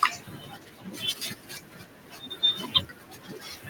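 Noise suppressor artifacts run through the whole of this speech recording: the suppressor pulls down, frame by frame, every band it judges to be steady noise, so the room noise, sitting about 19 dB below the speech, dips and swells with the talking. Speech cut by the noise suppressor occurs from 0 to 2.42 s and again from 2.58 s to the end, with the deepest drops about 12 dB. Here the suppressor mistook softer parts of the speech for noise and turned them down along with the background, so quiet consonants and word endings come across swallowed and faint for roughly two seconds in the first stretch alone.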